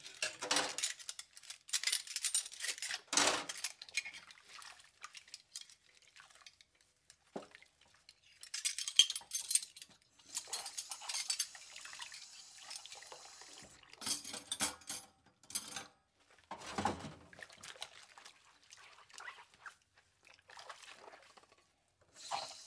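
No technical faults are audible.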